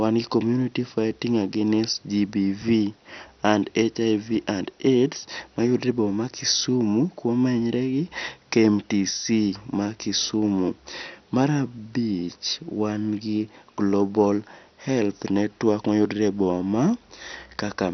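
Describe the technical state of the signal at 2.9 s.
At 2.9 s the speech sounds dull and gurgling, with a granular roughness and nothing above about 6.1 kHz, as it does throughout. The likely cause is heavy MP2 compression, consistent with roughly 48 kbps, where starved upper sub-bands switch off and coarse quantisation grinds the rest.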